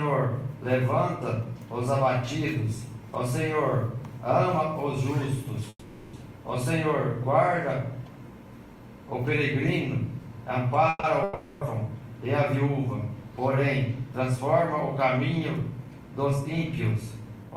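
The audio has a call audio freeze at 5.69–6.15 s and again at 10.89–11.05 s. The last sound is stretched into a fading buzz, with a brief silence before playback resumes intact, likely because delayed packets left the jitter buffer empty. A long network dropout follows at 11.23–11.63 s, where a decaying continuation covers about 380 ms of audio that is simply lost, likely from packets that never arrived. Jitter buffer speed-up then runs at 14.15–14.77 s (105%) and 15.17–16.09 s (108%), trimming pitch-period slices so the sound hurries at unchanged pitch, removing about 110 ms in total.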